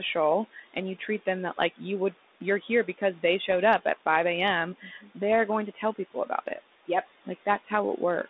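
From 0.53 to 0.77 s, again from 4.8 to 5.17 s, and from 5.74 to 6.6 s, the noise suppressor cuts into the speech, pulling it down by about 13 to 15 dB so the quieter bits sound swallowed. At 3.46 to 3.52 s and at 5.32 s, bit errors on the ADPCM link knock the decoder off track, leaving short pops and rough bursts.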